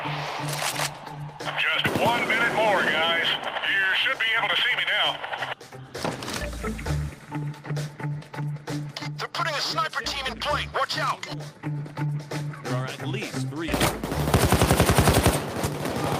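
No technical faults are audible.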